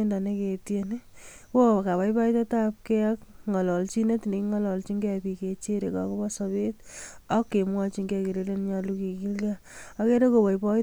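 Nothing in the recording stood out as a technical problem on listening.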